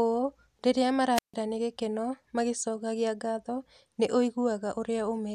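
A speech clip where the wireless microphone's radio signal fades and the receiver squelch mutes output, a wireless microphone squelch dropout from 1.14 to 1.34 s, leaving about 150 ms of near silence.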